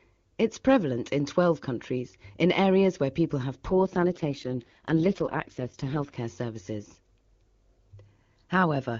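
An AMR rate drop runs from 3.70 s to 6.16 s in this speech clip. For those two and a half seconds the speech turns rough, buzzy and more synthetic. The bandwidth stays the same and nothing cuts out. The change in texture fits the AMR-WB (HD Voice) codec being told by the network to fall from about 23.85 kbit/s to 6.6 kbit/s, giving up coding detail for error protection on a weak radio link. Clarity returns once the higher rate resumes.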